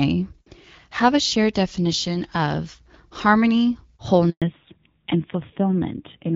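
Just after "shared definition of harmony", at 4.30 s, the speech cuts out in a handover gap lasting 120 ms, until 4.42 s. The call is being switched between networks, and no speech frames arrive while the new link comes up. The sound fades within a few tens of milliseconds into silence, and whatever was spoken during that interval is lost.

From 4.42 s to the end, the call shows a fallback to narrowband. Before the gap, the wideband HD Voice path carries speech with light codec coloration, consistent with AMR-WB at around 12.65 kbit/s. After the switch, nothing remains above 4 kHz, which fits a drop to the narrowband AMR codec at about 7.4 kbit/s. The loss of the upper band makes the speech sound muffled and boxy, and the lower bitrate adds a rough, grainy edge.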